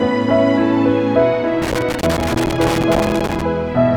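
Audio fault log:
1.62–3.42 s: loose connector crackle. For about 1.8 s the audio breaks up into an irregular burst of scratching and crackle, with the signal dropping in and out rather than fading smoothly. This fits a worn or dirty contact shifting in its socket: each time it loses and regains connection the waveform is chopped abruptly, and any DC present on the line turns those make-and-break edges into pops.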